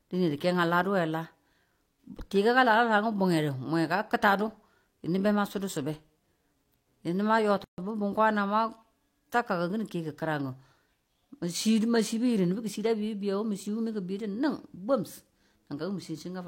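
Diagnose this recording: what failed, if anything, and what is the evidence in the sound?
At the codec stage, a gap at a join of encoded pieces: the speech stops dead at 7.64 s and resumes at 7.78 s after a 139 ms gap. Separately encoded segments kept their encoder delay and end padding. A spectrogram shows a blank vertical band with smeared edges.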